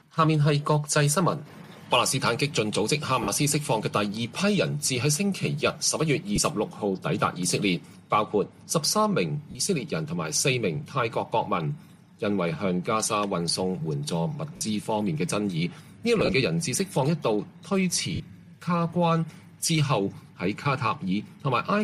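Lost LE Audio frames break the audio six times: about 50 ms at 3.23 s, 20 ms at 6.36 s, 40 ms at 9.51 s, 50 ms at 14.56 s and 18.15 s, and a scattered 16.2–16.33 s burst. The LC3 decoder refills each gap with the last spectrum under random signs, so tones smear into brief noise.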